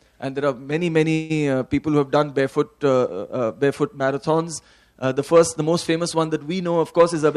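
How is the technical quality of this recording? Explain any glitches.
There is one glitch, a call audio freeze, running from 1.13 to 1.32 s. The sound stalls and the last moment is stretched into a short buzzy hiss that fades without dropping to silence. The likely cause is packets held up in transit, draining the jitter buffer so the receiver filled about 0.16 s itself. When the audio resumes it continues from where it stopped, so nothing is lost, but everything after runs about 0.16 s later.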